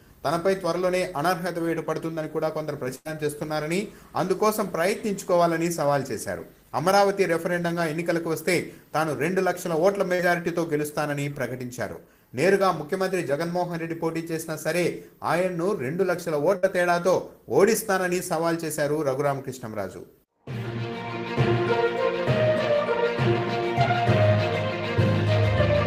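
At 2.95 to 3.07 s, a burst of packet loss removes about 100 ms. The receiver extends and fades the last sound before resuming further on. A shorter concealed packet loss at 10.15 to 10.21 s drops 40 ms, heard as a brief smear blended back in. A second burst at 16.57 to 16.65 s loses 60 ms the same way.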